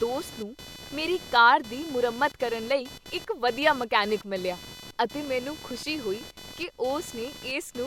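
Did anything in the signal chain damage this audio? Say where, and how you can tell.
Yes: computer activity noise runs throughout, a buzzing pulse near 500 Hz about 20 dB below the speech, entering through the analogue wiring as processor load shifts the shared ground.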